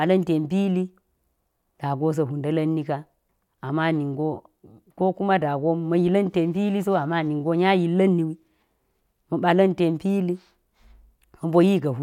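Speech, and no technical faults can be heard anywhere in it.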